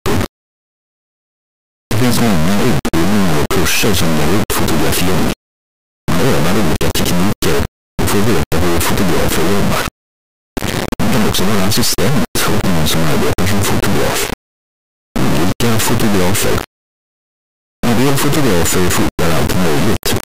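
From the very start and right through to the end, the whole clip suffers from integer read as float. The samples were written as 32-bit integers but get decoded as 32-bit floats, so each value lands either near zero or way past full scale. What you hear is a brutally loud, buzzy square-wave rasp slamming between silence and the clipping ceiling, dropping out entirely wherever the sound gets very quiet.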